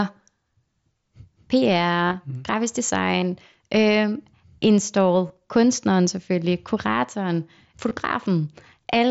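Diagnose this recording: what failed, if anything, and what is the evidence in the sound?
Concealed Bluetooth headset packet loss on the radio link. There are brief buzzy repeats across 2.05–2.14 s and at 3.21, 5.28 and 7.89 s. The gaps are filled with recent waveform, not silence.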